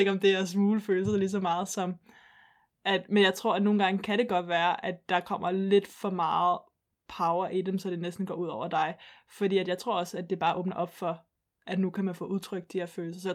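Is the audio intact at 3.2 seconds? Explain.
Yes, the speech at 3.2 seconds plays through cleanly, with no dropout, click, distortion or other fault at that moment.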